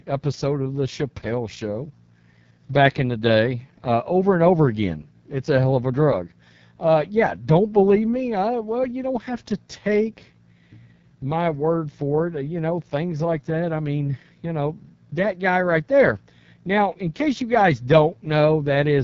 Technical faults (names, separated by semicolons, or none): AMR wideband (HD Voice) codec